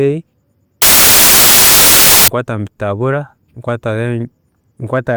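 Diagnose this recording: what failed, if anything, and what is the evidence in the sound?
The sample-format conversion stage failed. From 0.82 to 2.28 s the speech gives way to loud, harsh broadband noise. That's samples built from the wrong bytes: misread byte order or alignment turns the jittery low bits into the big part of each value.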